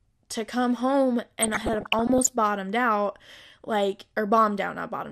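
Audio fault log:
throughout: MP2 compression. The speech sounds dull and gurgling, with a grainy edge in the upper range as high bands flicker in and out. The cause is likely MPEG Layer II coding with too few bits, which fits about 80 kbps, so upper sub-bands are switched off or coarsely quantised.
1.40 to 2.30 s: DAB burbling. Just after "to come home" the speech breaks into burbling blips of noise that last until "bottomed out like". Bit errors of around half a percent got past the error correction into the MP2 data, so corrupted samples put short blips of noise in single sub-bands.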